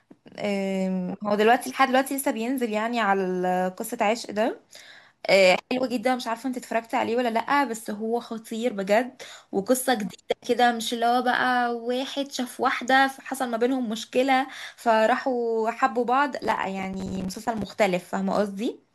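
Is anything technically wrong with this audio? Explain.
Yes. From 16.44 to 17.64 s the speech breaks into processor overload crackle. The processor misses deadlines for its short buffers, around 5 ms each, dozens of times. Each miss leaves a hard-edged gap of silence. Together they sound like gritty tearing.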